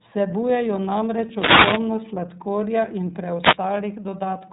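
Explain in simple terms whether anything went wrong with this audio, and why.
Wireless microphone noise hits occur twice: from 1.33 to 1.87 s, just before "sladkorja in", and from 3.39 to 3.59 s, right after "sladkorja in". Each sounds like a quick swish or burst of static. The microphone sends its signal by radio, and when reflected copies of that signal briefly cancel each other out, the receiver loses its grip. Its own hiss surges up and buries the voice until the signal returns.

The iLBC codec affects the whole speech clip. This phone-style compression squeezes the audio into small 30 ms chunks, each rebuilt on its own, and it throws away everything above about 3.8 kHz. The result is plainly audible: the voice sounds muffled and narrow, like a telephone call, with a slightly rough, artificial edge where the codec has only approximated the original sound.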